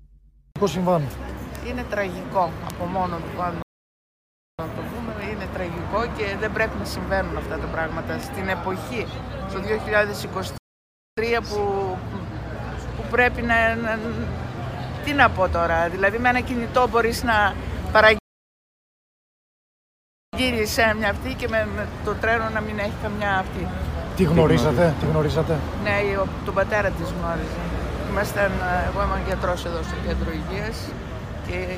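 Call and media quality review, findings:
Bit error spike at 1.55, 2.70, 8.23 and 29.32 s. Single sharp broadband ticks unrelated to the sound. Probable memory or digital link fault flipping one bit in one or two samples.

Rebuffering stall at 3.62 to 4.59 s, 10.58 to 11.17 s and 18.19 to 20.33 s. Silence, then clean resumption where playback stopped. Player buffer ran dry. Adds about 0.96, 0.60 and 2.15 s.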